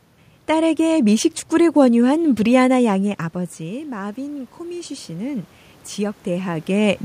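Speech clip where the talker drops off mic around 3 seconds, and from 2.98 to 6.99 s you hear automatic gain rising: the AGC hears the input fall by about 13 dB and slowly cranks itself up by about 7 dB, so voice and room noise swell together.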